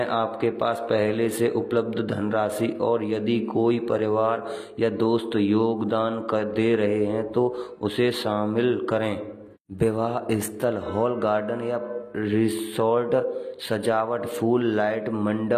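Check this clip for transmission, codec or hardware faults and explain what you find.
One codec fault runs through the whole speech clip. From start to finish there is likely HE-AAC compression. The treble is rebuilt from copied lower bands, so s sounds turn gritty and lispy, nothing sounds above 14.9 kHz, and the plainly audible damage fits roughly 24 kbps.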